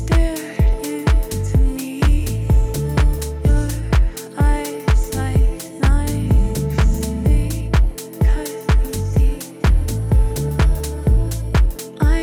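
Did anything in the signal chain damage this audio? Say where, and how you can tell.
Yes. DAB burbling, at the codec stage, from 7.91 to 7.98 s: a brief burst of burbling across 7 frames. A small fraction of bit errors escaped correction, corrupting MP2 audio data.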